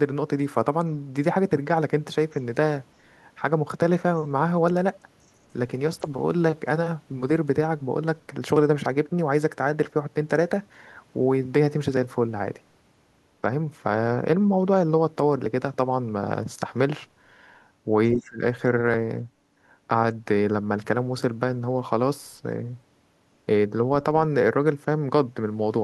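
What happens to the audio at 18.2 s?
Speech suppressed in double talk occurs from 18.14 to 18.41 s: the speech dips sharply, by about 25 dB at its deepest, for roughly a third of a second. An echo canceller likely mistook the talker for loudspeaker echo while both sides spoke, and turned the speech down.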